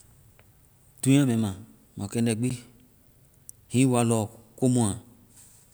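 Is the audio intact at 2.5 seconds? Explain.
No. At 2.50 s the speech drops into a block of digital silence about 10 ms long: a run of samples goes silent, and the signal jumps to and from that flat line with no fade. Those abrupt edges sound as a brief tick or click rather than an audible gap. On the waveform it appears as a short, nearly flat, near-silent segment. On a spectrogram it shows as a thin blank column with a broadband streak at each edge.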